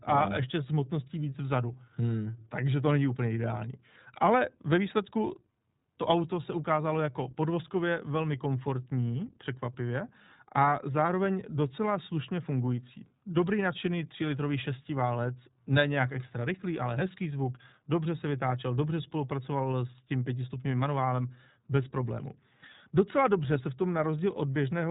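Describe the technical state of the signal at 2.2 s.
At 2.2 s the speech carries iLBC codec damage, present throughout the clip. Each short frame, consistent with 20 ms, is coded independently, leaving the voice plainly rough and slightly synthetic, with nothing above 3.8 kHz, fitting the 15.2 kbps mode.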